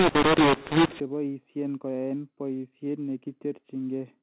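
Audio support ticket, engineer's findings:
Harsh, distorted speech with noise filling the gaps, 0.00–1.00 s: mu-law and A-law mixed up, mu-law samples decoded as A-law, scrambling levels and lifting the quietest samples off silence. Unlike clipping, quiet passages are damaged too, and the 4 kHz telephone band stays intact.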